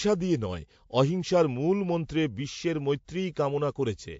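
Throughout the speech, nothing appears above 7.6 kHz, a flat spectrogram ceiling, with smeared, layered artefacts that likely come from transcoding between lossy codecs, possibly a low-rate MP3 re-encoded as WMA.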